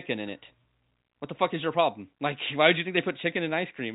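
No technical faults can be heard anywhere in the speech. The G.711 telephone coding is audible as a band limit with nothing above 4 kHz, which fits a 64 kbps mu-law line, and at most a faint quantisation noise rides along with the level.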